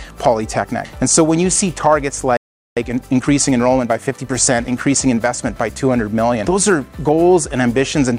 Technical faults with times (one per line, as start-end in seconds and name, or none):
2.37-2.77 playback stall
2.77-5.41 time-compressed catch-up